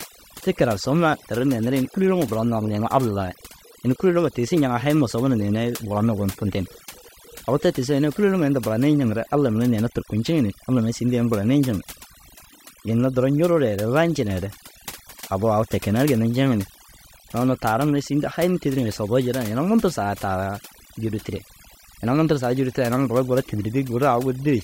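Overdone noise removal runs through the whole recording. Frequency bands near the noise estimate are cut away, leaving near-silent gaps with twinkling specks.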